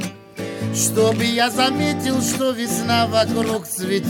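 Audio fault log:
No faults heard anywhere in this recording.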